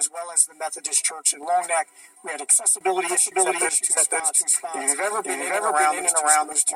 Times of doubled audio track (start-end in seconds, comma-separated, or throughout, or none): 3.09-6.76